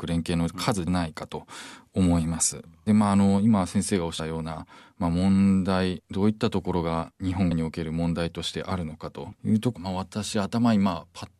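Damaged data in a compressed stream makes the decoder misread frames in this speech clip and briefly lose sync while it hunts for the next valid frame header. That comes through as four short glitches, at 0.86, 4.18, 7.50 and 9.75 seconds.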